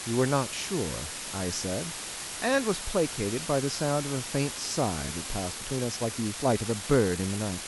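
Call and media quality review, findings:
Constant, even hiss across the whole speech clip, sitting only about 10 dB below the voice, with no distortion. Low bit depth with dither: roughly 5-bit resolution, rounding error spread into steady white noise.

5.48 s to end: pace abruptly rushed, pitch unchanged. Time-stretched section, sped up about 1.36x, likely from fit-to-length processing dropping short segments.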